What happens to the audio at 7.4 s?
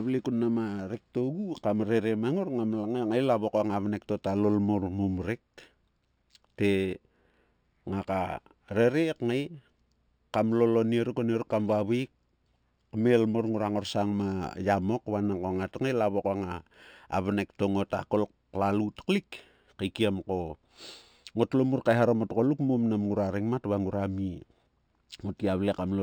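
At 7.4 s the speech sounds dulled at the top with a faint metallic shimmer on sibilants. The cause is imaging from linear upsampling, present throughout the clip. The sound points to 12 kHz material raised to 44.1 kHz by straight-line interpolation, leaving a mirror image at 6 to 12 kHz, roughly 35 dB down.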